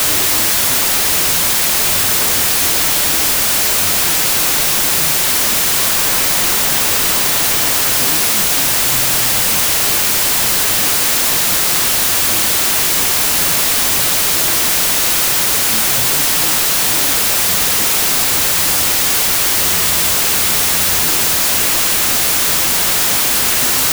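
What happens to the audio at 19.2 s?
At 19.2 s the wrong sample width fault is present, as it is across the whole clip. Audio written as 32-bit integers is read as 16-bit. Each sample splits into two values, and only the upper half carries the real signal. The speech sits buried in loud noise, at half speed and an octave low.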